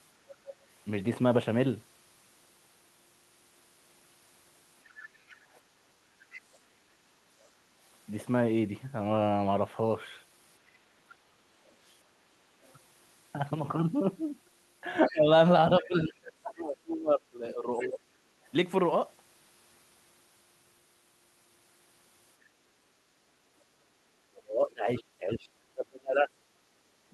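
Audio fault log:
4.88–6.58 s, 11.69–12.73 s, 14.95–15.86 s, 17.50–17.87 s: other side's voice leaking through. A second, fainter voice sits under the speech in these four stretches. It is weakest at 11.69 s, far down and barely there. It is loudest at 17.50 s, about 15 dB under the talker. The first and third runs sit between, roughly 25 dB down. It is likely the far end's loudspeaker sound reaching the microphone, with the echo canceller leaving a residue.
15.10–18.18 s, 23.23–27.14 s: speech suppressed in double talk. The speech dips and thins in pieces across these spans. In the first span about two seconds in total are affected, with the deepest drop around 25 dB. In the second span the speech falls by up to around 30 dB. Both sides likely talked at once, and the echo canceller turned down the talker along with the echo.
22.48 s, 26.57 s: background gated by the echo canceller. The room sound briefly sags by about 6 dB, then comes back. 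The first dip lasts around 150 ms, the second around 70 ms. The canceller clamped the microphone while the loudspeaker was playing and then released it.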